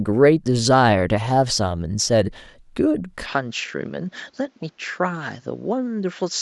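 A speech clip where the input most likely switched to a poorer device at 3.26 s with no gap, and that device carries on to the end. The sound drops about 5 dB in level, loses everything above 7.6 kHz, turning duller, and picks up a faint new background noise.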